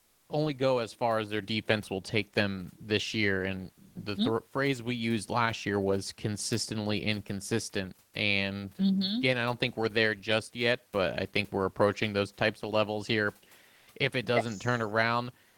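Comfort noise in place of the background fills 0.00 to 0.25 s, 13.75 to 13.87 s and 15.49 to 15.57 s. In each pause, the room noise gives way to a smooth, featureless hiss, about 1 dB quieter in the first two gaps and level in the last. The likely cause is discontinuous transmission, consistent with Opus DTX: the sender goes silent when no speech is detected, and the receiver synthesises a rough stand-in for the background.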